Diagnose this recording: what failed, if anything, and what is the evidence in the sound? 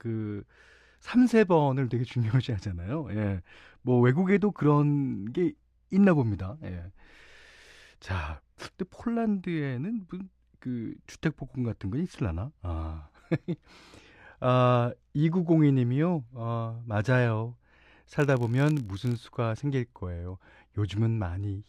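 A filter restarted on every block in the driver or buffer stage. From 18.07 to 19.21 s a 46.9 Hz buzz rides on the speech, tracking its level, which fits a 1024-sample buffer. The filter starts each block from silence, leaving a transient at every boundary.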